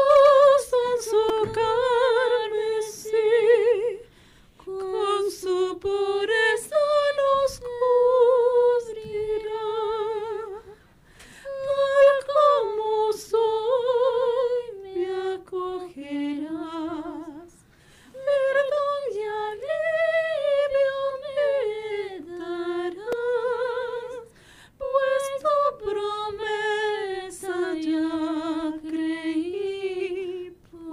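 At 1.29 s there is a repeated buffer fault. New audio did not arrive in time, so the device played its last block again. Each block lasts 2.9 ms, which fits a 128-sample buffer. Here the block plays three extra times, and about 10 ms of new sound is lost. With such a tiny block, it comes across as a brief buzz. At 23.12 s it happens once more, with one extra play. That repeat is a short click.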